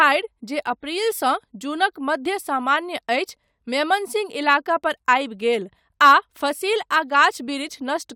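No technical faults are audible.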